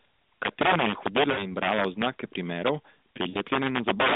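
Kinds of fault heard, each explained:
Integer overflow: Loud peaks push past the largest integer and wrap to the opposite sign instead of being limited, giving violent cracks far sharper than clipping. Here the signal runs about 12 dB too hot, so around 3 percent of samples flip throughout.
Lost AMR speech frames: At 1.32–1.50 s and 3.30–3.41 s, stretches of about 60 ms and 40 ms are missing. Each gap fits a run of damaged frames. The narrowband decoder repeats the last good pitch and vocal-tract settings with falling gain, so the speech smears and fades.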